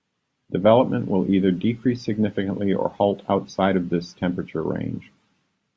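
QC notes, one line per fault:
No faults heard anywhere in the speech recording.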